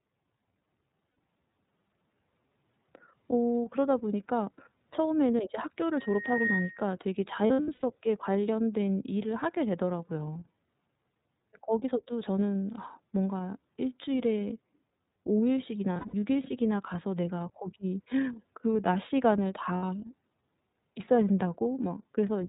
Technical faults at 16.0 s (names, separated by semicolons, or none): iLBC codec; lost iLBC frames